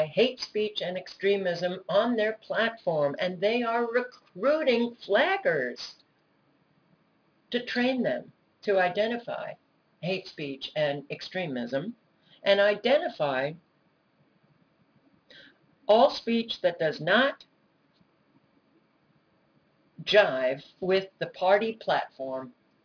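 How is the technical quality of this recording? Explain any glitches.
The recording has a single technical fault, aliasing, which runs through the whole clip.

From start to finish, the high end sounds gritty and metallic. Stray tones at unrelated pitches sit around 20 dB below the sound, and the spectrum stops hard at 5.5 kHz. The sample rate was likely lowered, which fits a drop from 48 kHz to 11 kHz, without first filtering out content above the new limit. That content folded back below 5.5 kHz as false tones.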